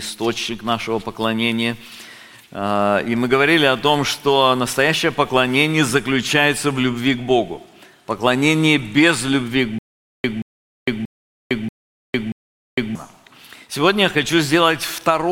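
From 9.79 s to 12.95 s the audio falls into a stutter with silent gaps: a 178 ms fragment plays, then about 456 ms of dead digital silence, and the cycle repeats every 633 ms, five times in all. It sounds like the player or stream likely stalled and kept replaying its last buffered chunk on each retry before running dry, so whatever should have played during those three seconds is simply gone.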